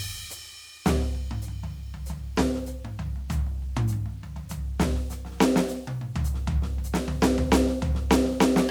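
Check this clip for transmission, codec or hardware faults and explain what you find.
One fault runs through the whole music clip. Grainy, signal-following distortion roughens quiet passages; this is likely low bit depth without dither, rounding to about 9 bits, leaving error only around 35 dB down.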